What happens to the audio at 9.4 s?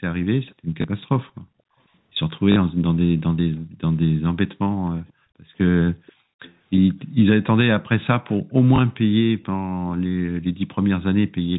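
From 9.42 to 9.46 s a brief, very faint echo leak appears: a delayed copy of earlier speech, about 487 ms late and far below the direct voice. It is likely a far-end loudspeaker echo that the echo canceller failed to fully suppress.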